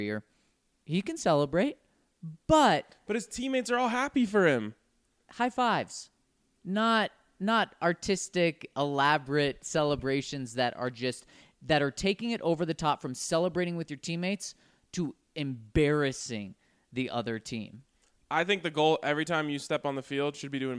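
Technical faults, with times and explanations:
No technical faults detected anywhere in the speech recording.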